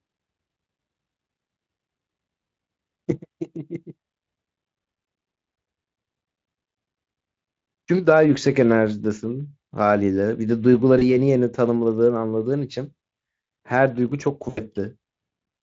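At 10.99 to 11.15 s and 14.49 to 14.6 s, VoIP packet loss concealed by the speech codec: about 20 ms, then 80 ms, went missing, and the decoder extrapolated, leaving brief buzzy or noisy, fading distortion through the light Speex coding.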